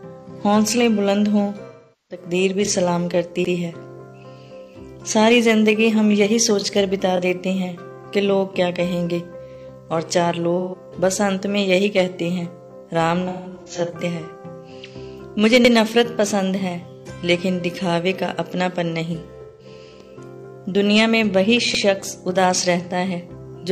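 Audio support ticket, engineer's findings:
AAC frame loss with concealment, 1.67–2.25 s: about 0.43 s of smeared, noisy fill. Decoder is rebuilding missing frames from the last good spectrum. Shorter patches at 10.59–10.76 s (about 0.13 s) and 19.42–19.66 s (about 0.17 s). At 13.28–13.91 s, losses are scattered over about 0.6 s, the longest run around 150 ms. Pattern suggests packet loss upstream of the decoder.

Overlapping chunks at 3.45 s, 15.65 s and 21.75 s: a 100 ms stutter, with the same short piece played twice at each join. Spacing fits a 6-second chunking stage where each chunk starts before the previous one finishes. Likely component is the segmenting or streaming buffer logic. Fix the chunk offset so boundaries abut rather than overlap.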